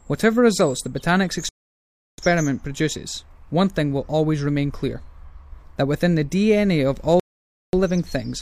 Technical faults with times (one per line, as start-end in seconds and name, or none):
1.49-2.18 rebuffering stall
7.20-7.73 rebuffering stall